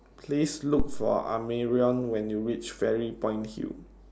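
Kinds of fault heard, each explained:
Phantom power thump: a supply switched on or off on a live input sends a step through coupling capacitors, heard as a deep thump at 0.80 s, about -16 dBFS, decaying over roughly 100 ms.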